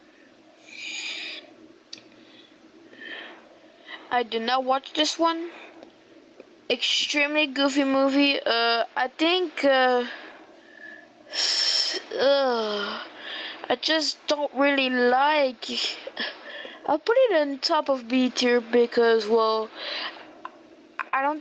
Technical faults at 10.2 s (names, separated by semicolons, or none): gain pumping